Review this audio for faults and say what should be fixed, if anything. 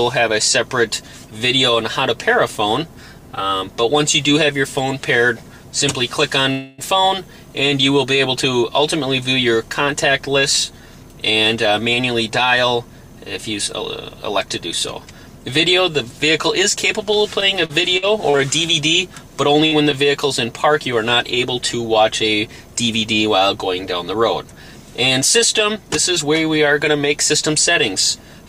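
At 6.51 to 6.81 s there is a call audio freeze: the last sound is extended for about 269 ms and then resumes where it stopped, with nothing lost but the delay increased by 269 ms. The likely cause is delayed packets draining the jitter buffer. Prevent it by improving network stability and sizing the jitter buffer adaptively for the observed delay variation.

Jitter buffer speed-up occurs at 11.55 to 12.90 s, running at 107% speed with about a tenth of a second removed, and at 24.14 to 24.60 s, at 106% with about 40 ms removed. The receiver trims short pitch-period pieces to shed excess buffered delay, so the audio runs quicker at unchanged pitch. Prevent it by reducing packet bunching on the path and using gentler, slower buffer-shrink policies.

Repeated packet loss (robotic sound) runs from 17.40 to 18.42 s. Five gaps were concealed, totalling 148 ms of filled audio and 120 ms of missing content. 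The longest gap is 49 ms, and concealment covers 15% of the span, which gives choppy audio with pieces absent. Prevent it by fixing the lossy link and enabling forward error correction or redundancy.

Short concealed packet loss at 19.67 to 19.74 s filled 45 ms by continuing the preceding sound, replacing 40 ms of real content before blending back, and is heard as a brief smear. Prevent it with forward error correction and prioritised, lower-loss transport for media packets.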